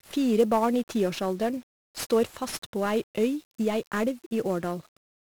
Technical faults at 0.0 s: 1-bit DFPWM compression

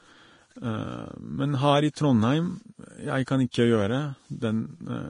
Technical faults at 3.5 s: Vorbis compression; pre-echo

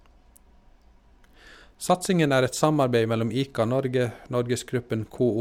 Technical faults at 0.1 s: none

